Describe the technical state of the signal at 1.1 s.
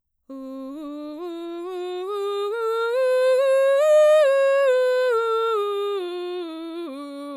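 At 1.1 s the music plays through intact, with no dropout, distortion or other fault audible at that moment.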